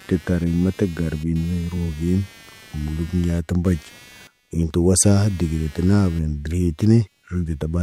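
Load changes in the computer driving this speech recording are disturbing the ground shared with its audio circuit, and the result is computer activity noise across the whole clip. It sounds like a buzzing, chirping texture pulsing at around 200 times a second, sitting some 25 dB under the speech. It rises and falls with the machine's processing rather than with anything being said.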